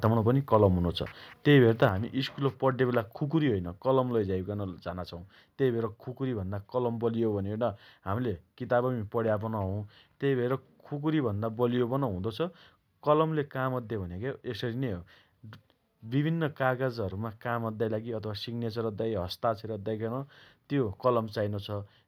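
A speech recording in which, at about 1.89 s, the voice and the background behind it drop together in level, abruptly and by about 6 dB, and stay at that lower level afterwards. Nothing fades; the change is a single step. This is a microphone volume stepped down, likely the call software judging the input too hot and cutting the device's input volume in one move, which lowers everything the microphone picks up at once.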